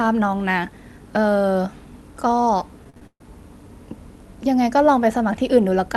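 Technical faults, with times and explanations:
2.84–3.21 s, repeated packet loss (robotic sound): The speech breaks into six quick holes, the longest 132 ms. About 0.21 s is patched by stretching the previous sound, giving a robotic buzz. In all about 0.21 s of the speech goes missing across the holes, so the speech sounds choppy.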